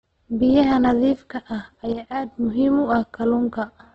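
From start to finish the speech sounds grainy and rough, with a hissy, noise-filled texture and nothing above 8.2 kHz. This is heavy Opus compression, likely in its CELT music mode at a low rate, around 12 kbps. Starved bands are filled with noise instead of left empty.

At 1.93 s the whole signal, speech and background noise alike, drops abruptly by about 6 dB, then jumps back up at 2.32 s. This is a sudden gain jump, likely a digital gain change applied instantly between samples with no ramp.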